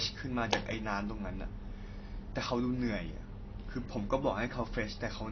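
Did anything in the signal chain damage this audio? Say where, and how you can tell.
Yes. AAC compression damages the speech throughout, at the codec stage: nothing remains above 6.6 kHz, and the audio sounds plainly dull, smeared and fizzy. The likely cause is an AAC-LC encoder lowering its cut-off and coarsely quantising bands, which fits a bitrate near 24 kbps.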